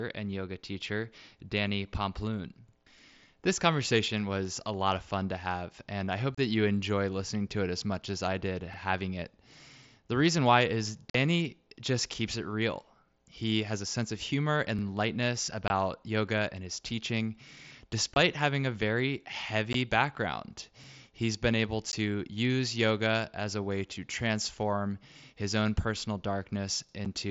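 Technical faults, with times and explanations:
2.69, 8.74, 14.79, 20.84 and 26.89 s, overlapping chunks: At each of these points a 50 ms piece of speech plays twice. The joins recur every 6 s, which points to audio handled in 6-second chunks that each begin 50 ms before the previous one ends. Each doubled piece is heard as a brief stutter or click.
6.35 to 6.38 s, 11.10 to 11.15 s, 15.68 to 15.70 s, 18.14 to 18.16 s, 19.73 s, 21.92 s and 27.05 s, unconcealed Bluetooth headset packet loss: The wideband mSBC speech drops out in holes of 7.5 to 45 ms. The longest is at 11.10 s. Lost headset packets were replaced by silence or an idle pattern rather than smoothed over. The holes have abrupt edges.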